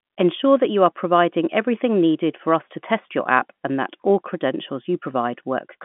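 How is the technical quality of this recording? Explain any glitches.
The technical quality of this recording holds up, with no glitches to explain.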